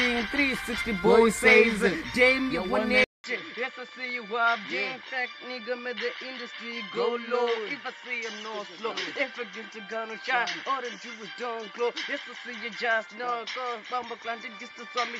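At 3.04 s a 0.2 s silence gives way to duller, quieter sound, nothing above 7.6 kHz, with faint new hiss: the input likely switched to a poorer device.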